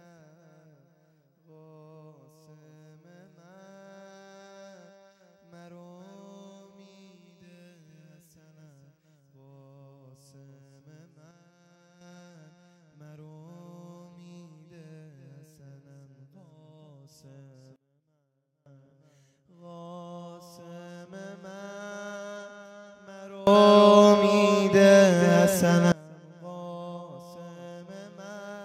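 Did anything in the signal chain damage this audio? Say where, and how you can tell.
Yes. Sudden gain jumps occur at 11.31–12.01 s (about −6 dB), 17.76–18.66 s (about −24 dB) and 23.47–25.92 s (about +24 dB). Sound and noise floor step together with no ramp, unlike an automatic gain control's gradual rise. The likely cause is an unsmoothed digital gain setting.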